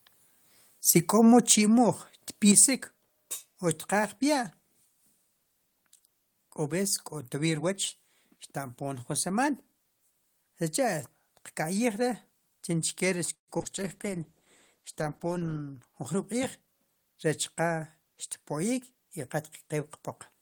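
Speech, with trouble early and in a cluster from 13.3 s. At 1.50 to 1.53 s the loudest peaks flatten and crackle. That is microphone overload, with the input gain likely set too high. Peaks run about 6 dB past the converter's limit, and around a tenth of the samples are clipped. At 1.52 s the level of both voice and background drops by about 4 dB in one step. That is the microphone volume stepped down, likely by the call software reacting to the clipped peak. At 2.49 to 2.65 s the harsh crackle returns as a second microphone overload, probably from the same excess gain. This time peaks sit about 7 dB over, and roughly one sample in twenty is clipped. From 13.33 to 13.50 s there is a call audio freeze. The last sound trails off into about 130 ms of silence. Packets were likely held up and the jitter buffer ran dry. The audio then resumes where it stopped, so 144 ms of gap is inserted and nothing is lost. 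Right after, short concealed packet loss smears the sound twice. The first is at 13.58 to 13.62 s, where about 20 ms is missing. The second is at 13.62 to 13.67 s, where about 40 ms is missing. The receiver bridged both holes by extending the preceding sound. From 13.77 to 15.66 s a call bitrate drop takes the encoder from 32 to 13 kbps. The audio turns coarse and watery and loses its top end. From 15.40 to 16.68 s a jitter buffer speed-up makes the speech sound hurried at unchanged pitch. It plays at 109 % speed. Small pitch-period slices totalling roughly 150 ms are cut out to shrink the built-up delay.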